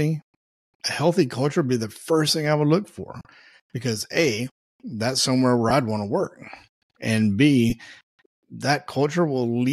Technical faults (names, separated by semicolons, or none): lost LE Audio frames